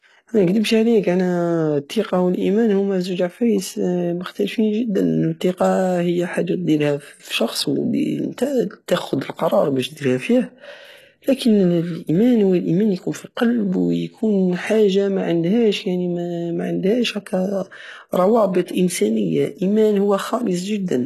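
All the way through, the treble sounds synthetic: s sounds come out gritty and lispy, and nothing reaches above 12.3 kHz. That's likely HE-AAC compression at something like 16 kbps, where the top end is copied up from lower bands rather than actually coded.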